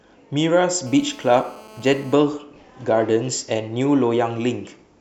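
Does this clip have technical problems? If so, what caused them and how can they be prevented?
Yes. From 0.87 to 2.14 s the speech carries GSM phone buzz, a hard, raspy tone at about 217 Hz with a dense stack of harmonics. It sits about 24 dB below the speech. A nearby 2G handset on a call sends radio bursts 217 times a second. The audio circuitry rectifies those pulses, so the burst rate turns into an audible buzz unrelated to the speech. It stays steady while the call lasts. To prevent it, keep phones away from the recording gear or switch them off.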